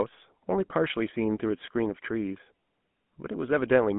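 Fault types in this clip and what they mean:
GSM full-rate codec: The speech has been squeezed through an early mobile-phone speech coder that models the vocal tract and excites it with a coarse, regularly spaced pulse train, and the result fits the 13 kbps full-rate scheme. The damage is plainly audible throughout as a buzzy, gravelly roughness on the voice. The band is telephone-narrow, roughly 150 Hz to 3.5 kHz, with nothing at all above 3.8 kHz.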